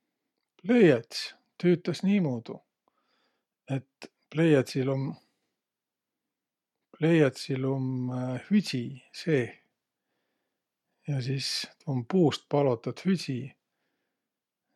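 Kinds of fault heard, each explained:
Nothing stood out on listening to this speech.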